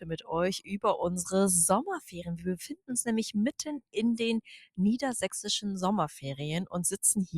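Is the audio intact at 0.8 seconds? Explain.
No. The sound cut by the noise suppressor runs from 0.6 to 0.78 s, ending just before 0.8 s. The suppressor judged this sound to be noise and pulled it down by about 12 dB at its deepest.

The noise suppressor applied to music or sounds is also active at 0.8 s. This processing, built for speech, keeps treating sustained content and ambience as noise, swinging the level by around 10 dB. Onsets pass while held parts sink, giving a pumping, thinned quality.

A DC offset is present at 0.8 s as well. The entire waveform sits shifted away from zero by a constant amount. It is inaudible as such, but it eats headroom and leaves steady energy at the very bottom of the spectrum.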